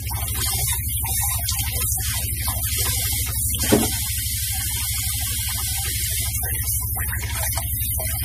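MP3 compression runs throughout, and the damage is plainly audible: nothing remains above 15.3 kHz, and weak detail flickers in and out with a watery, swirly texture. This is likely a low-bitrate encode, consistent with about 40 kbps, where the encoder starved the treble and thin components.

Clock drift buffer slips appear from 1.92 s to 8.11 s as about four clicks, one every 2.06 s. Two mismatched clocks, likely off by roughly 70 ppm, let the buffer drift until a handful of samples is dropped or repeated at each tick.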